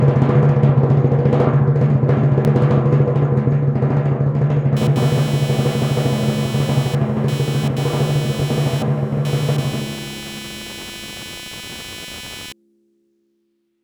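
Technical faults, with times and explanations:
2.45 s, audio missing between chunks: the music skips forward abruptly, as if roughly 50 ms had been cut out and the two sides butted together with no gap of silence. The likely cause is a recorder or processor handling the audio in blocks of 6.0 s and dropping a short stretch while closing one block and starting the next, so the music jumps instead of pausing.
4.76 to 12.52 s, computer activity noise: a buzzing, chirping layer sits under the music, pulsing at around 300 times a second and roughly 15 dB below the music. It arises when changing load on the computer's processor, graphics or other hardware disturbs the ground shared with the audio circuit. Its rise and fall track that activity rather than anything in the music, which is why it sounds detached from the playing.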